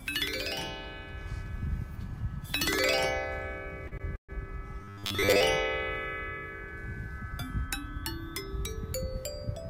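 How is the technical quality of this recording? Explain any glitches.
The recording has a cluster of network-related glitches packed into a short window between about 3.9 and 5.4 s.

At 3.87 to 3.94 s and again at 3.98 to 4.02 s there are two short stalls from late packets. In each case a packet missed its playout time and the jitter buffer emptied, so the receiver held the last bit of sound until the data turned up. The first stretch is 42 ms and the second 20 ms. Nothing is lost, but the sound hangs for an instant with a faint buzzy smear, pushing the timing back by the same amount each time.

From 4.16 to 4.31 s there is a call audio freeze, likely caused by packets being held up in transit long enough to drain the buffer completely. About 130 ms of filler is inserted. A brief tail continues the last sound, then roughly 110 ms falls to silence before the audio resumes where it left off. 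The result is an audible dropout that adds delay rather than removing material.

From 4.82 to 5.41 s the audio takes on a robotic sound from repeated short buffers. Audio was arriving too seldom, so the playback side kept looping its last short buffer while most of the real signal, around 70% of it, was skipped. The repeat rate imposes a fixed 100 Hz buzz, which fits a 10 ms buffer. The sound becomes a rigid, metallic drone that only loosely tracks the original.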